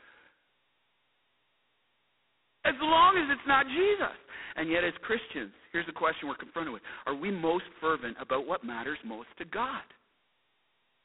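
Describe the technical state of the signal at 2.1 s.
At 2.1 s the speech carries G.726 ADPCM damage, present for the whole clip. Each sample is coded as a coarse difference from a running prediction. The harsh, rasping hiss tracking the speech level fits 16 kbit/s. The line band spans 250 Hz to 3.4 kHz, with nothing above 3.9 kHz.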